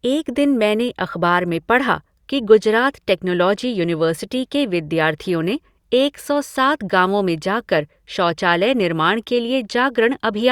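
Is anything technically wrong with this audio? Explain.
No, nothing is technically wrong with this audio.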